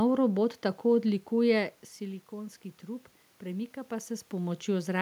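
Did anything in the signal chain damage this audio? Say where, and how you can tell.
No, nothing damaged this audio.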